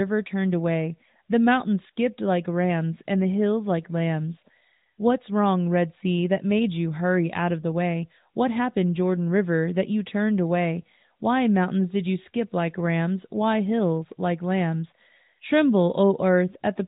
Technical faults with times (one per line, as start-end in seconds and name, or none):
none